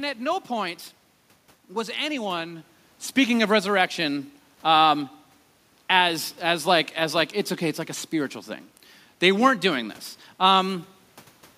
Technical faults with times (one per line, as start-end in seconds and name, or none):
none